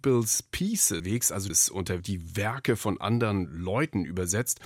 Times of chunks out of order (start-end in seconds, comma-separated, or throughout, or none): 1.00-2.00